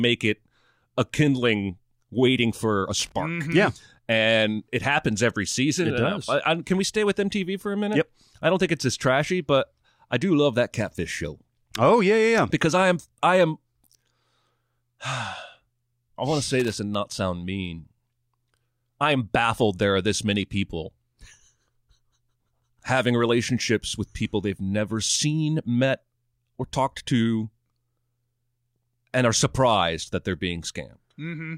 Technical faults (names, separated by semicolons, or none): loose connector crackle